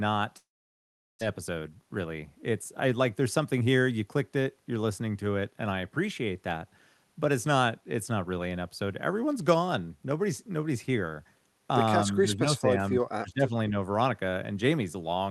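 From 0.37 to 1.23 s, a long network dropout likely cut off the incoming packets. The receiver stretches the last sound into a fading buzz that soon gives way to silence. About 600 ms of speech never plays, and the audio resumes later in the sentence.

Between 1.50 and 3.83 s, a jitter buffer speed-up trims the surplus of about 200 ms that built up after the gap. The buffer removes many tiny pitch-period slices, so the speech runs about 9% fast at unchanged pitch and sounds hurried.

From 12.22 to 13.74 s, speech is suppressed in double talk, likely because the echo canceller cannot tell this talker from the far side's echo and turns both down. The voice dips by up to about 20 dB for roughly a second in total.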